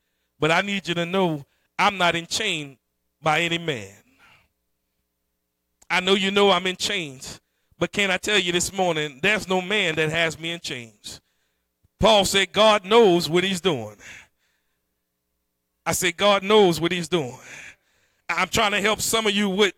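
At 9.94 s, just after "morning there's no man" and before "me in chains", a loud pop lands on the speech: two sharp thumps in quick succession over about 0.22 s, peaking a little above the level of the voice. The likely cause is a sudden voltage step, from a plug, a switch or static, that the downstream circuitry shaped into a pulse. Unlike a dropout or a digital click from lost data, the speech carries on intact beneath both thumps.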